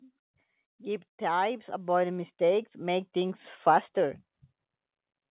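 Speech, with an automatic gain rising fault from 0.77 to 3.59 s: the gain control climbs by about 10 dB, so voice and background noise swell together. A deliberate fade or a louder talker would leave the noise floor steady. The audio passes through a call path with nothing above 4 kHz, consistent with a narrowband G.711 codec.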